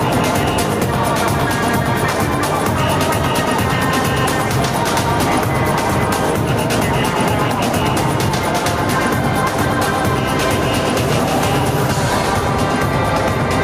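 No technical faults can be heard anywhere here.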